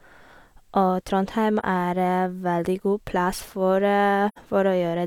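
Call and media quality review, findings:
AAC frame loss with muting, 1.60–1.64 s and 4.28–4.38 s: about 43 ms and 85 ms spectral zeroing, fitting one and two lost frames. Overlap windows fade it, giving soft-edged dropouts.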